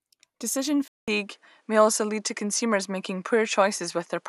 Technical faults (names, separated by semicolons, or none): input switched to a poorer device